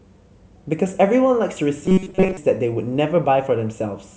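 Speech, with robotic sound from repeated short buffers between 1.86 and 2.37 s. The voice collapses into a rigid, metallic buzz at 188 Hz, a repeat period of about 5.3 ms. That likely comes from starved playback looping the last buffer for most of that stretch while fresh audio is skipped.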